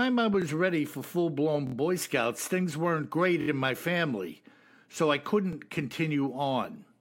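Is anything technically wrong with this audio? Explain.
Yes. The speech has four instances of a repeated buffer, where fresh audio arrived late and the playback device replayed its last block of about 23 ms, which fits a 1024-sample buffer. At 0.42 to 0.44 s and 5.53 to 5.55 s the block plays twice, heard as a brief click-like stutter. At 1.67 to 1.74 s and 3.41 to 3.48 s it plays four times, giving a short buzzy stutter. No audio is lost. On a waveform, identical copies sit side by side with abrupt joins. A spectrogram shows a repeating slice bounded by thin broadband vertical lines.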